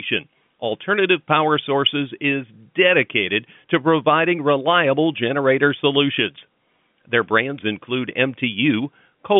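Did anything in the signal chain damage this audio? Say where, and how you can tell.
No, nothing in this speech stood out on listening as damage from any stage of the chain.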